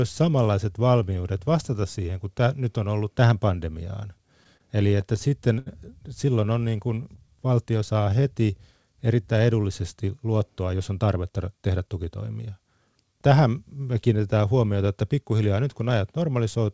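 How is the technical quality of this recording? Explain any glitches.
The recording has three timing glitches from a call's jitter buffer. The audio is band-limited, with nothing above 8 kHz, which fits a G.722 call path.

From 4.18 to 5.68 s, just after "on ollut tähän pandemiaan", the speech catches and drags in eight brief hitches, the longest about 76 ms. This is repeated stalls (stutter): late packets left the buffer empty, and the receiver stretched the last sound, about 159 ms in total, without losing anything.

From 6.35 to 8.52 s, leading into "erittäin edullisesti", the speech sounds drawn out and runs at 92% speed with unchanged pitch. This is a jitter buffer slow-down: to rebuild its reserve, the receiver repeated single pitch periods, adding about 184 ms.

From 10.59 to 12.24 s, right after "erittäin edullisesti", the speech sounds hurried, at 111% speed with the pitch unchanged. 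This is a jitter buffer speed-up: the buffer held too much audio, so the receiver cut out short pitch-period slices, roughly 200 ms overall, to reduce the delay.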